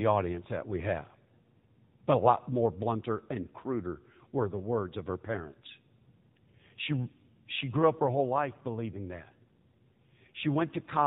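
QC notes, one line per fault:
throughout, AMR narrowband mobile codec: the speech has that unmistakable phone-call sound, with everything above 4 kHz gone and a clearly buzzy, synthetic edge on the voice. That's the mobile codec rebuilding each 20 ms frame from a vocal-tract model fed by a handful of pulses, and at this level of damage it points to one of the middle AMR-NB modes, which fits a rate of around 7.4 kbps.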